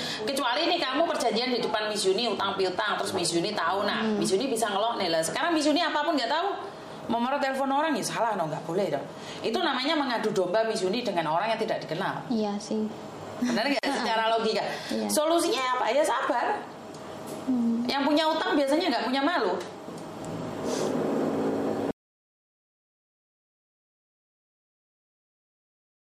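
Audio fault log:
13.79 s: gap at a join of encoded pieces. A brief hole of about 43 ms opens in the running sound, with edges smeared by the codec, and the sound resumes exactly where it left off. Two separately encoded sections were spliced without trimming the encoder's start-up delay and end-of-stream padding. Unlike a dropout, nothing is lost from the flow; only a short stretch of inserted silence sits at the seam.
21.91 s to the end: audio dropout to silence. The sound cuts off mid-flow and never returns, leaving plain silence with no room tone or noise floor for the remaining 4.1 s. The input was likely lost, through a disconnected device, a failed link or an accidental mute, while recording carried on. Unlike a splice gap, this silence is long, total and open-ended, and whatever followed is missing rather than delayed.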